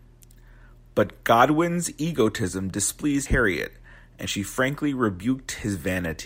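At 3.26 s and 4.26 s the speech jumps ahead, losing roughly 70 ms and 40 ms with no silent gap, likely a dropped buffer (overrun) rather than a dropout.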